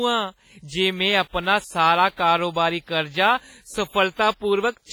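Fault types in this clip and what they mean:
WMA compression: throughout, heavy ringing, washy smearing and signal-following hiss, likely from low-bitrate transform coding spreading quantisation noise, consistent with roughly 24 kbps WMA.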